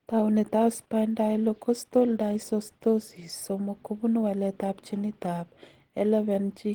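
Speech with plainly audible Opus compression throughout. It sounds muffled and hoarse, likely from hybrid-mode encoding at roughly 16 kbps. Content reaches about 20.1 kHz.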